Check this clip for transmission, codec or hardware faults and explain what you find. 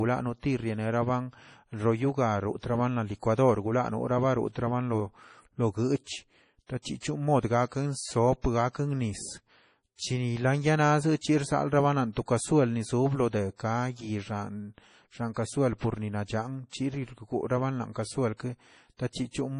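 The speech carries heavy damage from likely MP3 compression throughout. Nothing is present above 10.5 kHz, and the starved bit budget, which fits roughly 32 kbps, drops weak frequency lines frame to frame, giving watery, swirling sibilants and smeared consonant onsets.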